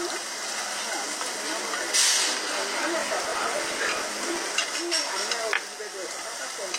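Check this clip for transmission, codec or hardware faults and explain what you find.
One fault is present. Processor overload crackle, 3.01 to 4.37 s: buffers of roughly 10 ms missed deadlines repeatedly, each refilled with stale audio, producing a gritty crackling tear that stops cleanly afterwards.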